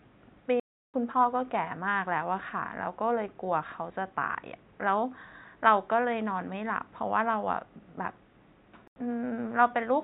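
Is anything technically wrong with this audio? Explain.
Yes. Two blocks of digital silence cut into the speech, at 0.60 to 0.94 s and 8.88 to 8.96 s. The output buffer likely went unfilled in time, so silence replaced the audio. The sound cuts out and back with no fade. The first leaves a 0.34 s hole, and the second an 85 ms gap.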